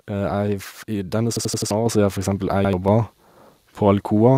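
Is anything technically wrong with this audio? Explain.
Yes, there are two kinds of fault in this speech clip.

Repeated buffer, at 1.37–1.71 s and 2.65–2.73 s. When fresh audio failed to arrive in time, the device replayed its last block of about 85 ms, which fits a 4096-sample buffer. The first event repeats that block four extra times, a stutter with hard joins that replaces roughly 300 ms of real audio. The second repeats it once, a brief double with around 100 ms missing.

Microphone volume stepped up, at 1.86 s. The call software judged the input too quiet and raised the microphone gain in a single step of about 5 dB. Voice and background noise jump louder together at that instant rather than ramping smoothly.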